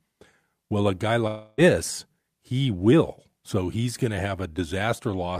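At 1.27 s, after "a guy", a long network dropout likely cuts the speech until 1.61 s; the receiver fills about 0.3 s with a fading buzz.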